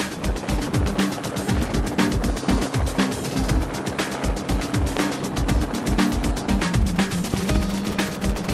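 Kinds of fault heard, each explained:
Loud pop: A sharp, brief transient sits on top of the sound, which continues underneath without interruption. A single pop occurs at 4.97 to 4.99 s, and a pair in quick succession follows between 7.34 and 7.58 s, each peaking roughly 15 dB above the surrounding level. This is likely a sudden voltage step or pulse, such as from a switch, connector, static discharge or driver glitch, shaped by the downstream circuitry into an audible click-thump.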